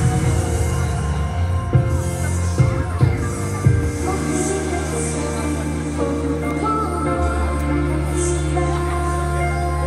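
Nothing stood out as a technical fault on listening to this audio.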